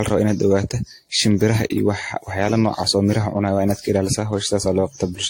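Generation loss throughout: the speech sounds swirly, hollow and smeared, with blurred attacks and nothing above 16.6 kHz, likely from about seven repeated AAC-style re-encodes.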